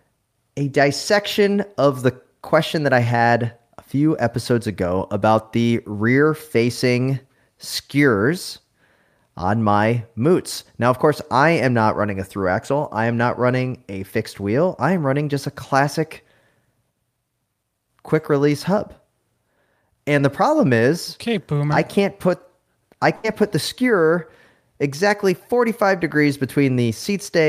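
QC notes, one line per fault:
23.15–23.26 s: burst of packet loss. About 80 ms of speech is missing. The receiver stretches and fades the last sound to fill the gap, then speech jumps ahead.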